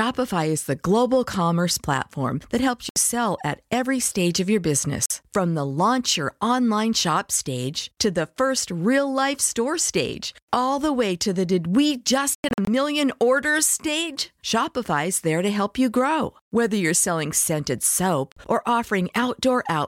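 The speech cuts to silence at 2.89–2.96 s and 5.06–5.10 s, then in a scattered cluster of gaps totalling 186 ms across 12.35–12.68 s, and again at 18.32–18.37 s. Each time it resumes further on, as if it kept playing. This is likely a Bluetooth dropout, where packets reached the headphones too late and were discarded.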